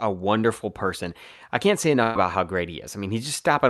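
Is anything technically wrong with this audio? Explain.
Yes, there is one burst of packet loss in this speech clip, from 2.03 to 2.17 s, between "person I can't say" and "how great". About 120 ms of audio was lost. The receiver stretched the last sound to fill about 114 ms, fading it into a held buzz, then jumped ahead. On a spectrogram this shows as smeared, repeating harmonics that dim before an abrupt restart. The waveform shows a decaying loop with no silence.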